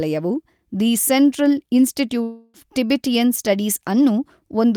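A long network dropout runs from 2.23 to 2.57 s. About 0.3 s of speech is missing, filled by the last sound stretched into a fading buzz that never drops to silence, before speech resumes further on. Likely, audio never arrived and the receiver padded the gap.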